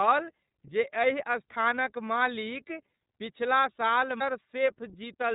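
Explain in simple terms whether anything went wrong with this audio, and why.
The speech sounds muffled and thin from start to finish, as if heard down an old phone line, with a slightly rough, buzzy, synthetic edge that is plainly audible. The cause is the iLBC codec, a telephone-style voice compressor. It throws away everything above about 3.8 kHz, which removes the crispness, and rebuilds the voice in short independent chunks, which fits 30 ms frames, leaving that coarse, artificial texture throughout.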